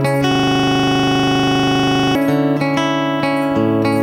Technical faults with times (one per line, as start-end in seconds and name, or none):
0.31-2.15 system hang loop